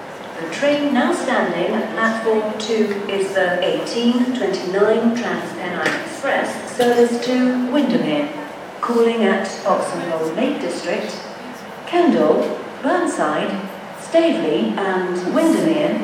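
No technical faults occur at any point in the audio, so there is nothing to describe in time order.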